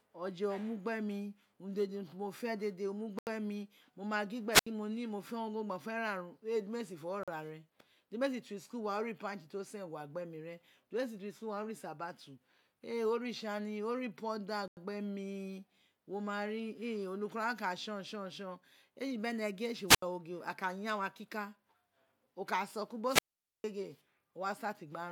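Speech with two kinds of dropout. Bluetooth stalls cut the sound to silence at 3.19 s after "fe dede o mu", 7.23 s, and 14.68 s before "gbe mi wo ma", for 82, 43 and 91 ms. These are likely caused by delayed packets emptying the headphone buffer. Wireless microphone squelch dropouts bring a rise of hiss, then a muted hole, at 4.51 s after "ma gin", at 19.87 s and at 23.06 s, for 74, 77 and 456 ms.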